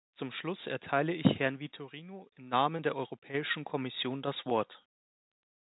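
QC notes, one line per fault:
0.41–4.73 s, automatic gain rising: the gain control judged the input too quiet and slowly raised its gain by about 8 dB over these four seconds. The speech and the background noise floor swell upward together, because the gain acts on everything the microphone picks up.
4.50 s, packet loss with pitch repetition: a gap of about 10 ms, which fits a single lost packet, was bridged by the receiver repeating the last pitch period. The loss was short, so it sounds like a brief, slightly held, buzzy note before normal speech resumes.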